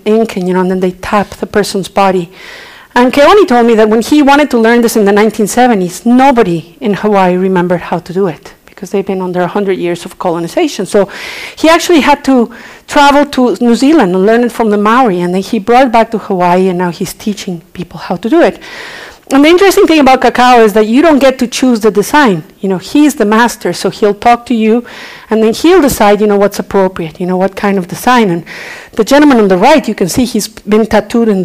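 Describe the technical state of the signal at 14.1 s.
At 14.1 s, as everywhere in the clip, hard clipping is present: the signal is driven about 14 dB past what the stage can pass, cutting around 7 percent of samples flat. Unlike gentle saturation's rounded warmth, those abrupt flat tops spray high harmonics, giving a harsh fuzz on loud moments.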